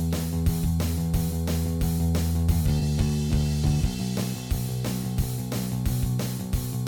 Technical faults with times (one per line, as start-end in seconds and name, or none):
2.79-2.82 corrupt frame concealed